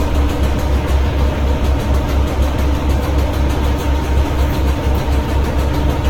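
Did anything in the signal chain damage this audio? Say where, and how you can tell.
Yes, codec stage: generation loss, likely about ten Vorbis re-encodes, makes the clip swirly, hollow and blurred throughout, nothing above 17.3 kHz.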